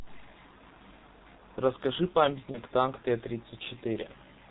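Throughout the speech, the G.723.1 codec shapes everything heard. This low-rate telephony coder carries no content above 4 kHz, so the sound is muffled and hoarse, and consonants smear together. The coarseness is consistent with its 6.3 kbit/s mode, and the damage is heavy. A spectrogram shows a hard ceiling at 4 kHz, with blocky formant tracks that change in 30 ms steps rather than gliding smoothly.

From 2.51 to 2.59 s comes VoIP packet loss concealed by the speech codec, matching a single lost 30 ms frame. The decoder had no new data, so it repeated its last pitch and filter settings at falling gain. The result is a brief stretched sound, a buzzy tone or coloured noise, that fades, and the voice stays weak or distorted for a moment after the stream resumes.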